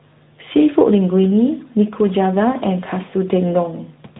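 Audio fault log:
Throughout: tandem speech coding. The speech passed through two lossy speech coders in a row, each decoding and re-encoding the previous one's output, so their distortions stack. The result is rougher, more muffled and more warbly than a single coding pass would be. The warble fits a low-rate AMR-NB stage working on an ADPCM-degraded signal. Nothing is present above 3.8 kHz, which gives the narrowband telephone dullness.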